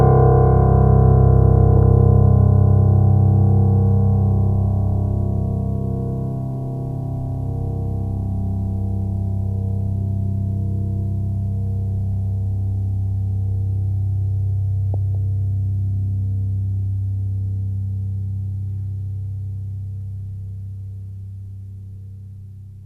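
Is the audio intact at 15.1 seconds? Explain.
No. DAB burbling spans 14.94 to 15.15 s. Weak reception lets bit errors, roughly 0.2 percent, slip past error correction into the MP2 data. Corrupted samples put short noise blips in single sub-bands, and corrupted scale factors make sub-bands jump in level for up to a frame, heard as blips and level jumps over the music.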